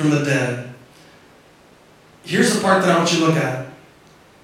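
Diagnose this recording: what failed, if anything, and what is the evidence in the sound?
Nothing failed: no stage of the chain, from capture to playback, leaves an audible trace on this speech recording.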